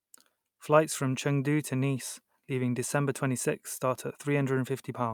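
Speech recording with no audible technical faults anywhere in the clip.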